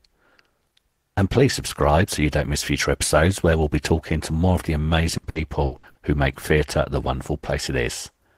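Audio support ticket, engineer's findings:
Repeated packet loss (robotic sound), 5.17 to 5.98 s, right after "to more of the" and clearing by "who make theatre the". Choppy, with pieces missing. Five short dropouts, longest about 60 ms, roughly 300 ms patched in total, so over a third of that stretch is concealment. Jitter buffer or network path: packets keep going missing, and each hole gets filled by stretching the last bit of audio.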